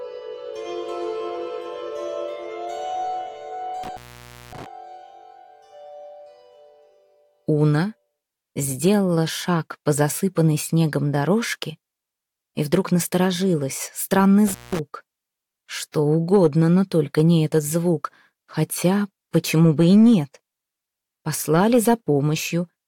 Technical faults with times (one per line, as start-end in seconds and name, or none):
3.83-4.66 intermittent contact
14.47-14.79 intermittent contact